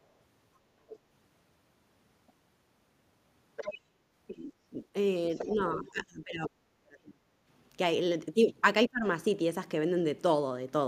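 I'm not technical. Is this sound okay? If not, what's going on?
No. In six brief moments you can hear a second, fainter voice behind the main speaker: at 0.88 to 0.99, 2.27 to 2.32, 3.56 to 3.78, 4.27 to 4.82, 5.32 to 5.55 and 5.88 to 6.05 seconds. Some are barely there, others fairly noticeable. This is the other side's voice leaking through, likely because the speaker's device played the other person aloud and its echo removal missed some of it.

From 5.52 to 7.23 seconds the speaker's voice sinks almost to nothing for about a second and a half in total. It dips again, less deeply, from 8.87 to 9.06 seconds. This is speech suppressed in double talk: both people were likely talking at once, and the echo removal turned everything down.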